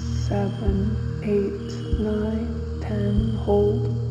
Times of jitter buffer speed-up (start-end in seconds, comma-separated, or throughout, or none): none